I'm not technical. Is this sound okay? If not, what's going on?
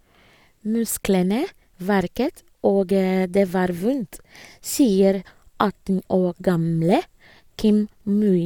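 Yes, this recording is fine: nothing goes wrong with the sound at any point, so there's nothing you need to fix.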